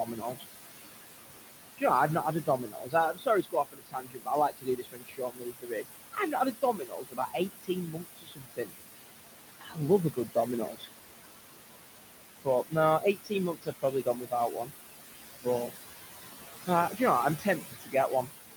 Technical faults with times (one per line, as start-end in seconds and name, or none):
0.00-18.56 noise suppressor artifacts
0.05-0.44 speech cut by the noise suppressor
2.46-8.75 speech cut by the noise suppressor
9.49-10.88 speech cut by the noise suppressor
12.44-14.72 speech cut by the noise suppressor
16.67-18.29 speech cut by the noise suppressor